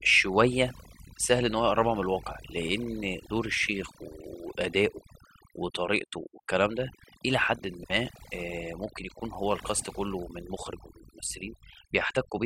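Across the whole clip the speech carries overdone noise removal: a denoiser pushed so hard that any frequency band sitting close to its noise estimate gets pulled down or cut away, taking softer parts of the voice along with the noise. Between phrases the floor drops to near silence dotted with chirping, twinkling residue. Unlike a noise gate, which mutes everything at once, this thins individual bands and leaves that sparkling residue.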